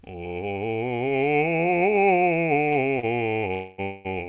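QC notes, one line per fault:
2.68–3.05 s: short stall from a late packet, three times (2.68–2.84 s, 2.73–2.77 s, 3.00–3.05 s). A packet was late and the jitter buffer ran dry, so the last sound of the music is stretched for 20–33 ms with a faint buzz or dip, then resumes from the same point. Nothing is lost.
3.54–4.07 s: call audio freeze, twice (3.54–3.80 s and 3.82–4.07 s). The music stops moving and the last sound continues as a fading buzz or hiss, band-limited like the rest of the clip to nothing above 4 kHz, for 245 ms and then 226 ms. It never drops to silence and then resumes where it stopped. The likely cause is packets held up in transit, emptying the jitter buffer.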